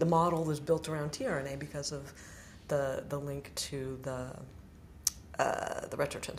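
No technical faults can be heard anywhere in this recording.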